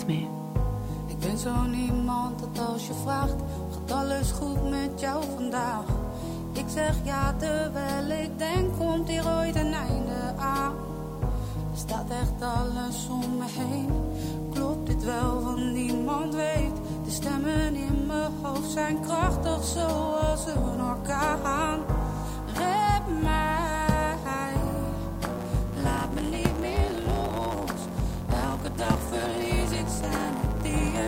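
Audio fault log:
Throughout: low bit depth with dither. The audio uses only 8 bits, and dither before rounding turns the error into an even hiss about 30 dB below the signal, without distortion.
25.27 to 31.07 s: block size mismatch (truncated). The tail of each block is dropped, giving a 109 Hz buzz. The audio runs 1.09 times fast at about normal pitch.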